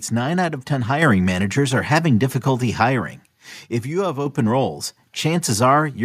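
At 1.02 s and again at 4.26 s the microphone volume is stepped up, each time by about 5 dB, as the call software raises the input gain in a single jump. Speech and background rise together instantly, with no fader-like ramp over a second or so.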